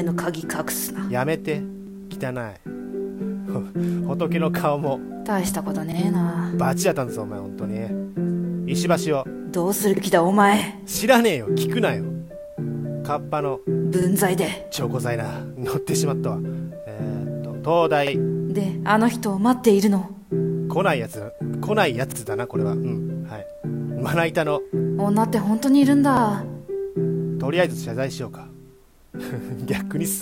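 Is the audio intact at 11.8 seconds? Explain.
Yes, the audio is intact at 11.8 seconds, with no audible fault at that moment.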